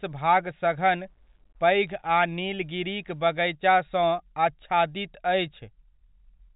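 From 0.76 to 3.21 s the speech takes on a grainy, signal-following distortion, with quiet passages turning gritty and decaying tails breaking up into steps. The likely cause is low bit depth without dither, roughly 10-bit truncation, leaving error around 50 dB below the signal.

At 1.87 s there are bit errors on a digital phone line. A low error rate has flipped bits in a few G.711 mu-law samples, and high-order flips jump the waveform abruptly while the surrounding telephone-band audio carries on unchanged.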